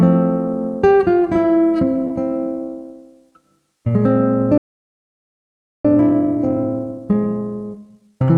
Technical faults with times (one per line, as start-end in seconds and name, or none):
2.07-2.12 short concealed packet loss
4.58-5.85 playback stall
5.85-8.37 time-compressed catch-up